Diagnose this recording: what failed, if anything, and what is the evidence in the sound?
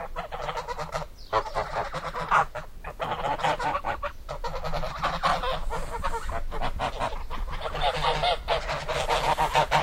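Codec stage: damaged data in a compressed stream. Brief glitches at 4.86 s and from 9.32 to 9.34 s mark frames the decoder misread before resynchronising on a valid header. A spectrogram shows short broadband smears, and the waveform shows abrupt discontinuities there.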